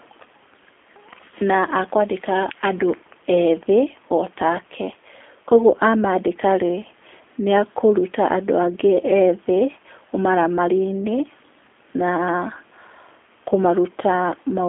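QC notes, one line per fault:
throughout, G.729 codec: the speech is carried at a quality that points to a roughly 8 kbit/s G.729-family coder, with the line band confined to about 250 Hz to 3.5 kHz. The codec does not store the waveform. It resynthesises each 10 ms frame from a vocal tract filter, a pitch predictor and a handful of pulses. That reconstruction gives the voice a plainly audible rough, buzzy, slightly synthetic texture, and the missing lows and highs leave it thin and muffled.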